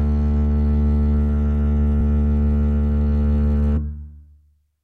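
At 3.76 s the music skips compressed frames: roughly three frames the decoder never played, so about 70 ms of audio vanishes. The music simply jumps ahead at the join rather than going silent.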